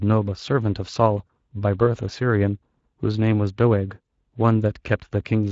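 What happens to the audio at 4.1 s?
Between 4.05 and 4.07 s, one 20 ms stretch of speech is lost in VoIP packet loss concealed by the speech codec. Rather than leave a gap, the decoder repeats its last pitch and filter at falling gain, so the sound becomes a brief smear that fades instead of a silent dropout or a click. Because each frame builds on the one before, the voice stays weakened or distorted for a moment after the loss. Behind this, the whole clip carries plainly audible Speex codec damage, a steady hoarse, noisy graininess whose character points to a bitrate around 20 kbps. That texture is constant, which separates it from the brief, fading artefact at 4.05 s.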